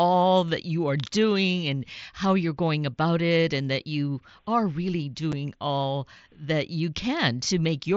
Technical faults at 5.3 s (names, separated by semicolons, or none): unconcealed Bluetooth headset packet loss